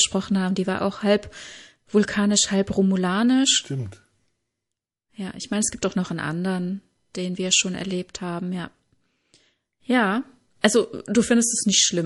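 Throughout the speech there is a watery, swirling quality, with metallic chirps on s sounds, dull treble and smeared consonant attacks. This is likely MP3 compression at a starved bitrate, around 48 kbps, where the encoder cuts the top end and drops weak frequency lines frame by frame.

From 10.61 to 10.64 s, a brief hiss of about 16 dB rises ahead of a sharp onset, spreading over 31 ms, and the attack sounds softened. This is pre-echo: quantisation noise meant for the loud attack filled the roughly 48 ms block, including the quiet moment before it. That points to the encoder not switching to short blocks.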